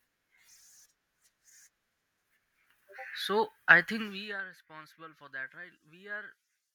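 From 4.0 to 4.42 s, just before "responsible for that right", zipper noise: the level drops about 20 dB in 1 dB steps, some fifty a second, ticking audibly rather than fading smoothly.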